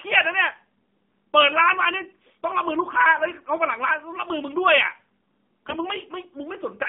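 AMR narrowband mobile codec throughout: the speech passes through a low-rate 7.4 kbps mobile coder. It keeps only about 150 Hz to 3.6 kHz, so the speech sounds muffled, buzzy and synthetic.

AMR bit errors from 5.68 to 5.79 s: over a stretch that fits about five 20 ms frames, a few percent of the weakly protected bits arrive flipped. The speech briefly turns hoarse, scratchy and gargly, while its pitch and level stay roughly the same.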